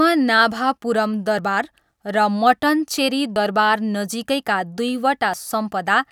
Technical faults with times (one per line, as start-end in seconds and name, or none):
1.39 audio missing between chunks
3.36 audio missing between chunks
5.34 audio missing between chunks